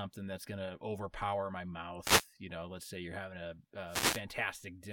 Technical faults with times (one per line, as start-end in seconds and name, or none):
2.01-2.27 wireless microphone noise hit
3.87-4.22 wireless microphone noise hit